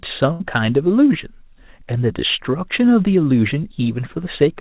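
At 0.32 s there's a burst of packet loss: roughly 80 ms drops out, papered over by a fading repeat of the last sound until 0.42 s, all within the 4 kHz-limited call audio.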